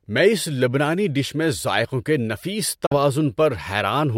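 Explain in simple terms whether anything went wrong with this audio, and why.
Something likely went wrong in the wireless link to the headphones: a Bluetooth dropout. A few packets of sound arrived too late and were thrown away, so the headphones had nothing to play for a moment. At 2.86 seconds, right after "میں ذائقوں کے نفیس", the speech cuts to silence for about 0.08 seconds, then returns at 2.95 seconds a little further along, as though it had kept playing during the gap.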